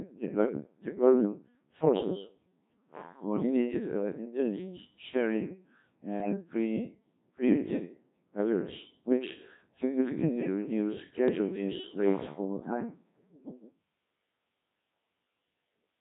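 Codec 2 vocoder damage runs through the entire speech clip: the voice sounds robotic and buzzy, consistent with Codec 2 at 1.3 kbit/s, where only pitch, voicing, energy and spectral envelope survive and the decoder rebuilds everything from sine waves, discarding the original waveform.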